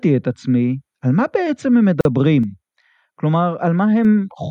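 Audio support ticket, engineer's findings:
Gap at a join of encoded pieces, 2.01 to 2.05 s: about 43 ms of silence cuts into continuous speech, with smeared edges; the sound resumes where it stopped. Encoder stage, where segments were encoded separately and concatenated untrimmed, keeping start-up delay and last-frame padding.

Sudden gain jump, 2.43 s: speech and noise floor drop together by about 4 dB in one step, and level returns at 4.05 s. Gain stage, likely a setting or bit shift applied with no ramp.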